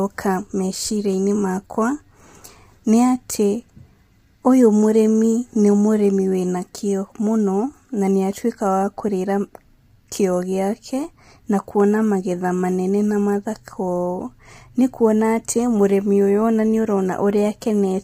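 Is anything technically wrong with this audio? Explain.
Yes. Throughout the speech, the voice sounds rough and grainy. Noise fills the gaps between harmonics. The top band sounds thin and synthetic. The likely cause is low-delay AAC compression. Its short frames resolve pitch poorly, and the heavy damage suggests about 24 kbps.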